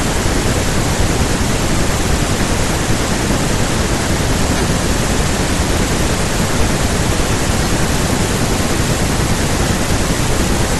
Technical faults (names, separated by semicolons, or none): lost LE Audio frames